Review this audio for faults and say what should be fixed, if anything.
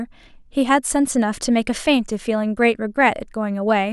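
There's sample clock jitter running through the whole speech clip. You hear it as a faint hiss or grittiness that rides on the louder, brighter parts and drops away in the pauses. The converter's clock is wobbling by something like 0.4 microseconds, so each sample lands a touch early or late, and the error grows wherever the waveform moves fastest. It sits roughly 50 dB under the signal, subtle. To prevent it, feed the converter from a clean, low-jitter clock source, ideally a well-regulated local crystal rather than a recovered or noisy external one.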